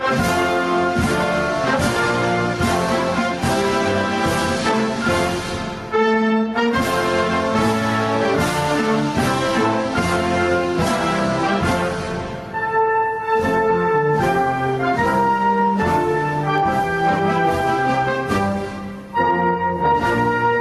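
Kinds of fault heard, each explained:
Gain pumping, throughout: the gain is pulled down each time a loud sound arrives, a swing of roughly 15 dB, so the level seems to breathe in and out. Loud and quiet passages sit unnaturally close together and the whole clip sounds squashed. This is likely an input gain set far too high for the microphone, with a fast limiter or compressor clamping down on each peak and releasing between them.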